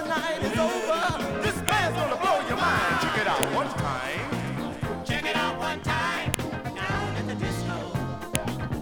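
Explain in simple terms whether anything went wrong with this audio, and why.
Four sharp clicks cut through the sound, at about 1.69, 3.43, 6.34 and 8.35 seconds. Each one is a file header played as audio. The recording was built from separate pieces joined end to end. Each piece began with a short block of file information that was never stripped out. The player treated those bytes as sound. So every join produces a brief, loud snap, no matter what the sound around it is doing.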